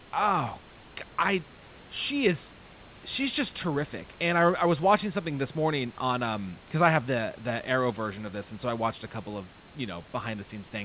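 No technical faults can be heard in this recording.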